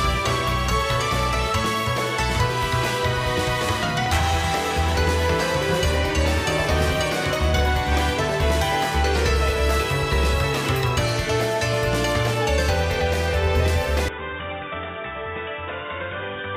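A loud pop at 4.06 to 4.10 s is a single sharp burst, around 10 dB above the sound, likely from a sudden voltage pulse such as a switch or static discharge.

An input switched to a poorer device at 14.09 s runs to the end. The sound abruptly turns dull, with nothing above 3.8 kHz and a drop of around 10 dB, likely from a change to a narrower-band microphone.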